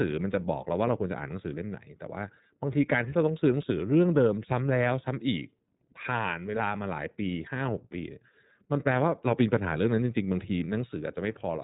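From start to end the speech carries iLBC codec damage, plainly audible: nothing passes above about 3.8 kHz, so sibilants lose their bite, and voiced sounds take on a rough, slightly synthetic grain. Each 30 ms frame's excitation is coded on its own, which fits the 13.33 kbps mode. A simple low-pass filter would dull the top without this graininess, and codecs that lean on earlier frames smear more smoothly across frame boundaries.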